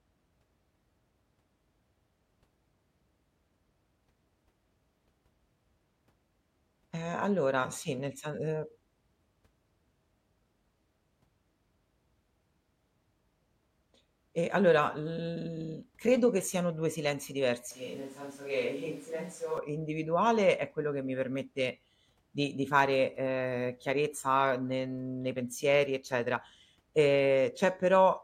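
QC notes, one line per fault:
17.71–19.58 s, switch to a distant microphone: the speech abruptly turns roomy and hollow, thinner in the bass and roughly 5 dB quieter, with background noise rising to around 25 dB below the speech, then snaps back just as suddenly. This is likely the close microphone dropping out and a farther one taking over. On a waveform the envelope steps down with a raised floor between words; a spectrogram shows a faded low end and reverberant smearing between syllables, with hard vertical edges at both switch points.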